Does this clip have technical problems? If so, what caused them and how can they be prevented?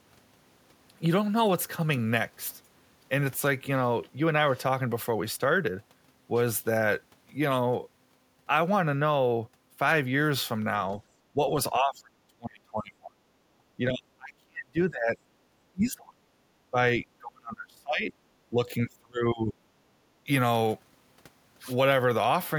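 Yes. Speech suppressed in double talk at 11.33–11.55 s, 11.77–13.17 s, 13.77–15.17 s, 15.72–16.32 s, 16.71–18.12 s and 18.5–19.55 s: the speech dips by roughly 10 dB at first, then by roughly 30 to 40 dB. This is likely an echo canceller treating the near talker as loudspeaker echo while both sides spoke, and pulling everything down. Prevent it with a canceller that has stronger double-talk detection and gentler residual-echo suppression.

Background gated by the echo canceller at 13.45–13.56 s and 20.06–20.2 s: the room sound drops by about 7 dB and then about 12 dB, for roughly 0.1 and 0.15 seconds. The canceller clamps the microphone while far-end audio plays, then releases. Prevent it by adding comfort noise and limiting how far the suppressor attenuates.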